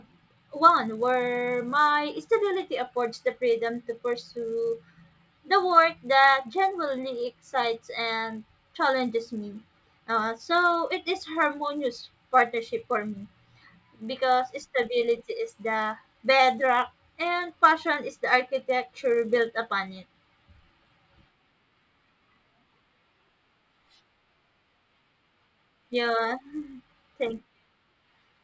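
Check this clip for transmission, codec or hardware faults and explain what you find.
There's one fault, present for the whole clip: the resampler restarted on every block. Each 10 ms block got converted in isolation, so its edges never saw the real neighbouring samples and each picked up a small error. You hear that as a 100 Hz buzz riding on the speech, dropping out whenever there's silence.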